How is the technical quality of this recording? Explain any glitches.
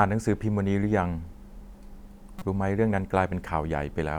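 There's one glitch in the speech, a corrupt frame decoded at about 2.38 to 2.42 s. A couple of compressed frames arrived with flipped bits, and the decoder played them anyway. The misread data put energy at the wrong frequencies, giving a short chirp or burst of noise that peaks around -20 dBFS.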